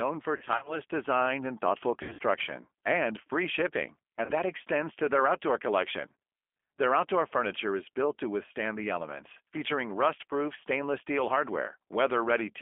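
Throughout, the speech passes through a G.729 codec at 8 kbit/s, rebuilt from filter and pulse models, so it sounds rough, synthetic and confined to about 250 Hz to 3.4 kHz. VoIP packet loss concealed by the speech codec strikes at 0.37 to 0.79 s, 2.03 to 2.23 s and 4.25 to 4.32 s, where the decoder extrapolates missing frames into fading buzzy tones or coloured noise, leaving weak, smeared sound afterwards.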